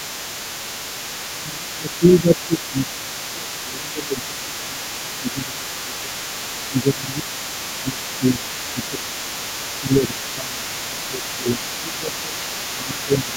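From the very start at 0.0 s right through to the end at 13.37 s, there's the other side's voice leaking through, sitting quietly underneath, somewhere around 15 dB below the talker. It's most likely a loudspeaker feeding back into the mic with the echo canceller not scrubbing it all out, so you keep catching a faint second voice in the background.

There's also speech suppressed in double talk, in four stretches: 1.36 to 6.23 s, 6.69 to 9.15 s, 9.79 to 12.37 s, and 12.72 s to the end. The likely story is that both sides were talking at once, the canceller couldn't tell the talker from the echo, and it clamped down on everything. The main voice sags by as much as roughly 15 dB, with a good chunk of the first stretch hit and shorter dips in the later ones.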